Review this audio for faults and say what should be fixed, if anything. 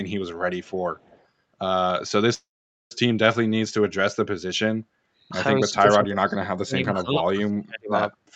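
At 0.63 to 0.71 s and again at 0.96 to 1.26 s, a faint second copy of the speech trails the original by about 228 ms. It is roughly 30 to 35 dB down. This is an echo leak, likely from a far-end loudspeaker whose echo canceller let residual pickup return. A fixed delay tied to the speech separates it from room reverb, which smears continuously rather than repeating as a distinct copy. Prevent it with headset use or better echo-canceller convergence and residual suppression at the far end.

From 2.34 to 2.92 s the sound is held and then trails into about 470 ms of silence before continuing exactly where it stopped. This is a call audio freeze, likely caused by delayed packets draining the jitter buffer. Unlike a dropout from packet loss, nothing is missing. Instead, about 565 ms of gap is inserted and the delay grows by that amount. Prevent it with a more stable network path or a jitter buffer that adapts its depth sooner.

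Between 5.68 and 6.39 s the speech dips by roughly 25 dB, and from 6.63 to 7.94 s it falls by as much as about 40 dB. This is speech suppressed in double talk, likely the echo canceller clamping the talker while the other side also speaks. It differs from packet loss concealment because the level is pulled down rather than the sound being replaced by synthetic filler. Prevent it with an echo canceller that has better double-talk detection and gentler nonlinear suppression.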